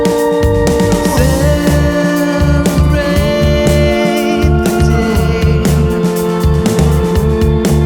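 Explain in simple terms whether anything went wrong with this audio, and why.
From 3.01 to 4.11 s, GSM phone buzz: a nearby phone's radio pulses leak in as a steady rasp, harsher than smooth mains hum.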